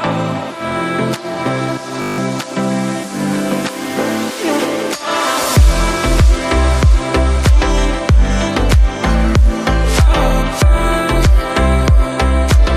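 From 2.02 to 2.18 s the system froze while the hardware recycled a 20 ms buffer, a system hang loop heard as a steady 50 Hz buzz.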